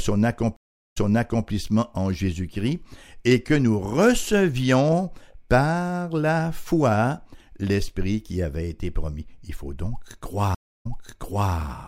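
Twice the connection dropped and the player had to reconnect and restart its decoder partway through the stream, a stream reconnect each time. From 0.56 to 1.48 s the speech cuts to about 0.4 s of silence, then resumes roughly 0.52 s earlier than where it stopped, so a stretch is heard again. From 10.55 to 11.53 s the same happens: about 0.3 s of silence, then a jump back of roughly 0.68 s, repeating the preceding speech.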